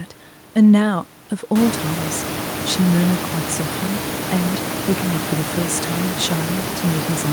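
Nothing stood out on listening to this speech, beyond the room's own background noise, which rises by about 19 dB at roughly 1.5 s and then sits about 9 dB below the speech.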